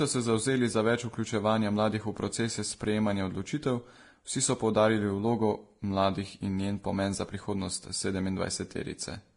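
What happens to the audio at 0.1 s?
At 0.1 s the speech already carries the layered coding damage that runs through the whole clip, most likely from transcoding between lossy codecs. The different artefacts heard together point to a low-rate Vorbis pass near 32 kbit/s followed by AAC-LC around 48 kbit/s, with the second encoder spending bits on the first one's artefacts. On a spectrogram there is a flat ceiling with nothing above 10.9 kHz, and patchy, blocky high bands below it.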